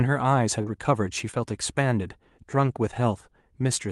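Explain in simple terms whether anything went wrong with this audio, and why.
Short concealed packet loss, at 0.61 to 0.65 s and 1.31 to 1.35 s: about 20 ms of this Opus call audio arrived too late each time. The receiver patched each gap by extending the preceding sound, leaving a brief smear or wobble in the speech.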